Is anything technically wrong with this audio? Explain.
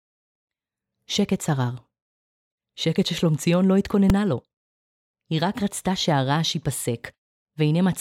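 Yes. At 4.10 s a single loud bang cuts through the speech: invalid numbers at full scale, where infinite or invalid values jammed the output at maximum for about 2.67 ms, which fits a 128-sample block.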